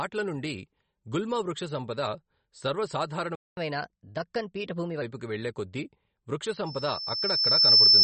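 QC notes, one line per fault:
Throughout: MP3 compression, plainly audible, with nothing above 8.4 kHz and a watery swirl, which fits a low bitrate around 34 kbps as the likely cause.
3.35 to 3.57 s: playback stall, the sound just drops out for about 217 ms mid-flow, likely the player starving for data, before picking back up.
3.57 to 5.02 s: catch-up at higher speed, running 1.15 times fast and roughly two semitones sharp through "వైపుకి వెళ్ళే కొద్దీ వృక్ష", then settling back to normal.
6.66 to 8.03 s: loudspeaker feedback squeal, a 5.3 kHz tone swelling over about a second to roughly 15 dB above the signal, mic hearing its own speaker.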